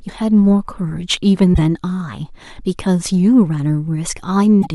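Damaged data in the compressed stream throws the decoder out of sync as it hunts for a valid frame, producing brief disruptions in the speech at 1.50–1.59 s and 4.59–4.67 s.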